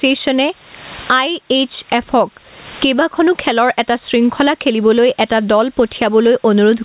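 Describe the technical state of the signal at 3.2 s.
At 3.2 s, as throughout the clip, there is gain pumping: the input gain is likely set far too high, so a fast limiter keeps clamping down on loud speech. The gain swings around 20 dB, flattening the dynamics, all within the call's 4 kHz G.711 bandwidth.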